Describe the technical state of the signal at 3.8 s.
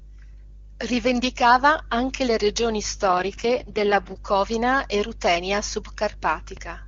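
An AMR rate drop runs 3.07–4.19 s, after "anche le regioni". The codec's lower mode roughens the speech; the spectrogram keeps full band, no gap, but smeared harmonics.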